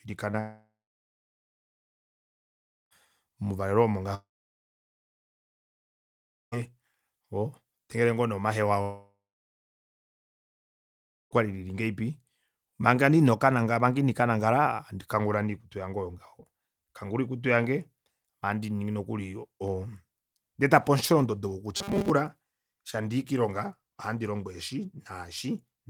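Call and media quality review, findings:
Short concealed packet loss, 0.31–0.35 s: brief smear where about 20 ms of the call was lost in transit and the jitter buffer's concealment extended the preceding sound, then crossfaded back. On a spectrogram: a short, slightly blurred column; the waveform shows a smooth bridged segment.

Long network dropout, three times: 0.39–2.93 s (ending just before "mouvalelo omo"), 4.15–6.54 s (after "mouvalelo omo"), 8.82–11.33 s (after "todengele ngoo nee omahewa"). Fading concealment tail, then about 2.2 s silence; likely transport loss. Spectrogram: blank bands.

Robotic sound from repeated short buffers, 21.77–22.10 s: metallic buzz at 200 Hz, so a 5 ms chunk was replayed across most of the stretch, likely playout buffer underrun. Spectrogram: evenly spaced horizontal harmonics; waveform: identical repeating cycles.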